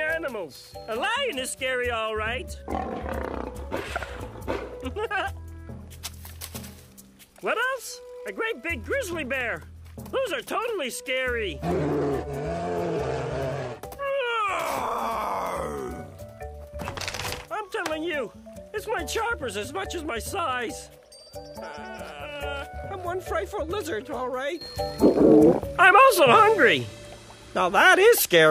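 A sudden gain jump arrives at 24.61 s and holds to the end: the level steps up by about 12 dB in one instant, sound and background noise rising together. Most likely a digital gain change was applied between two samples without any ramp.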